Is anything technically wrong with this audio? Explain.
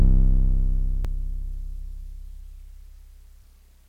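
Yes. Two brief glitches break into the music at 1.05 s and 3.42 s. These come from damaged data in a compressed stream: corrupted bytes make the decoder misread those frames, lose sync and hunt for the next valid frame header, producing a short chirp, squawk, click or hole.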